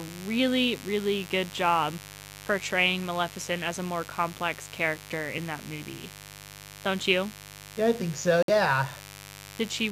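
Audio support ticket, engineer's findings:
Mains buzz throughout: raspy 50 Hz with harmonics up into the kilohertz range, roughly 20 dB under the speech. Sharp switching spikes, not a smooth transformer hum.

Bluetooth stall, 8.43–8.50 s: clean cut to silence of about 57 ms, then speech resumes. Likely a headphone buffer underrun while delayed packets were resent. A gap rather than a click or smear.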